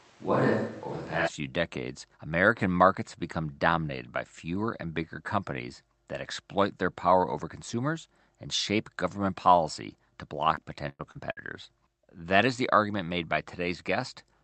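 From the start until 1.26 s, the close microphone's signal was likely missing and a distant microphone picked up the speech, so it sounds roomy and hollow, with thinner bass and room noise roughly 30 dB below the speech, at much the same level. Between 10.55 and 11.39 s, repeated packet loss left four holes, the longest about 103 ms, each patched by stretching the previous sound. About a quarter of that span is filled in this way, so the speech turns choppy and robotic, with pieces missing. Throughout, the call path's band limit stops the top end near 8 kHz.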